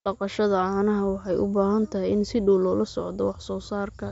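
Speech carried over a Bluetooth mSBC headset link, with content stopping at 7.7 kHz as that wideband codec dictates, and no technical faults to report.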